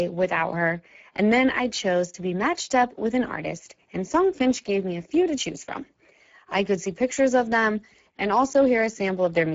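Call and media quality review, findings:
Speex codec, whole clip: hoarse, noisy speech, nothing above 7.7 kHz. Too few bits for the CELP excitation; the damage fits a low Speex setting near 10 kbps. Upper band is shaped noise fill.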